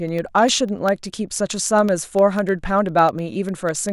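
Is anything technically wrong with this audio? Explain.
Yes. Periodic USB or driver dropouts run through the speech from about 0.09 s to 3.89 s, repeating every 0.1 s, around forty in all. At each interval something briefly stalls the USB transfer or the audio driver, and a tiny slice of samples, a fraction of a millisecond, goes missing and is replaced by silence. Each gap breaks the waveform abruptly, so the speech carries a steady ten-per-second train of ticks, audible only where signal is present.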